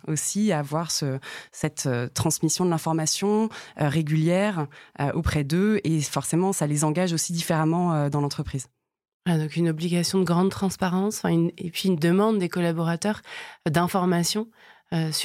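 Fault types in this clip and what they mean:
No technical faults can be heard anywhere in this speech recording; the signal stays continuous and stable throughout.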